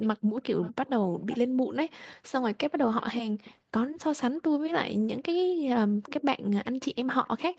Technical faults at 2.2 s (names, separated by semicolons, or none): none